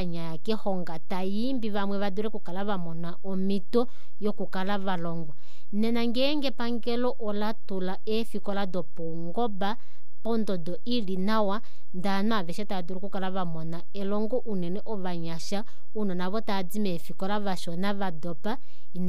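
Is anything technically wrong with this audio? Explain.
Yes. A DC offset runs through the entire speech clip: the whole waveform sits shifted from zero by a constant of about -20 dBFS. It is inaudible as such, but it eats headroom, reducing clean peak capacity, and shows as steady energy at 0 Hz.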